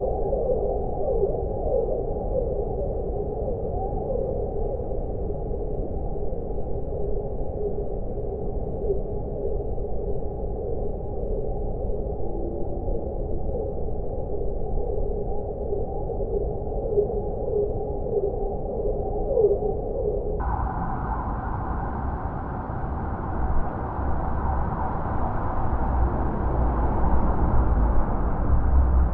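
An everyday sound recording, with the section from 0.0 to 20.40 s at the wrong speed, running at 0.531x and dropping about ten semitones, likely from playback on a mismatched clock.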